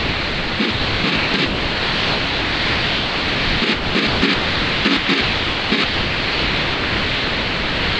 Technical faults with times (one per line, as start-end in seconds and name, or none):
0.00-8.00 sound chopped by the voice detector